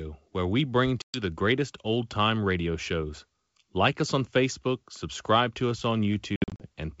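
Packet loss on an ADPCM call strikes twice. Lost packets are filled with silence, and the decoder's adaptive predictor and step size drift away from the sender's, so each hard-edged gap ends with speech returning slightly distorted before it settles within tens of milliseconds. From 1.02 to 1.22 s, after "where we bring", about 120 ms drops out before "the greatest old time". From 6.36 to 6.67 s, after "subscribe to us on", 160 ms vanishes in scattered holes across 240 ms, the longest 60 ms, over clear wideband G.722 sound.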